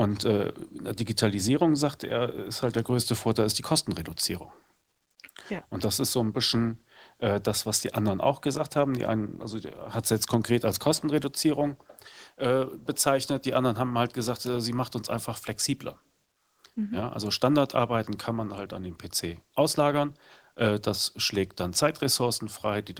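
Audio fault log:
No audible faults detected.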